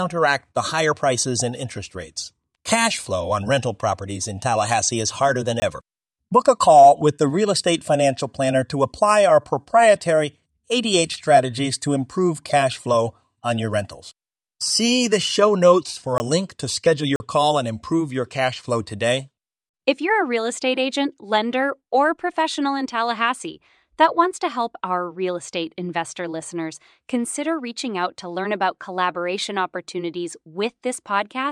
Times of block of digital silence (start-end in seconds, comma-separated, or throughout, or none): 5.60-5.62, 16.18, 17.16-17.20